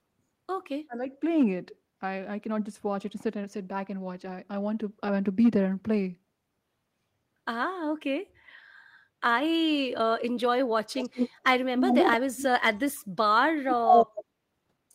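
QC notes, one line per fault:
0.87 to 1.02 s, speech suppressed in double talk: for about 150 ms the talker's level drops sharply, by roughly 25 dB at its deepest, so the sound dips out and comes straight back. The other side was most likely talking at the same moment, and the echo canceller, unable to tell the near talker from loudspeaker echo, turned everything down together. The result is a brief hole in the audio.
10.92 to 11.3 s, 11.76 to 12.18 s, 12.36 to 12.46 s and 13.7 to 14.25 s, echo leak: a copy of the voice arrives about 168 ms late and overlaps the original, giving a doubled, slappy sound. It's roughly as loud as the talker in the first two bursts, noticeably quieter in the short third one, and about 5 dB louder in the last. This is likely a far-end speakerphone whose echo canceller let part of the returning signal through.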